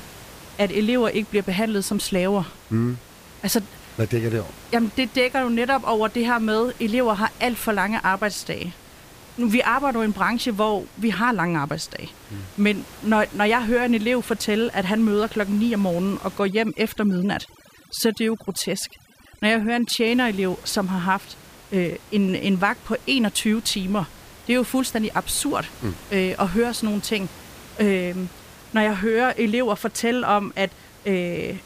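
From about 16.39 to 20.07 s, right after "om morgenen og", overdone noise removal pulls the room noise down and breaks it into twinkling, warbling specks until "som har haft øh".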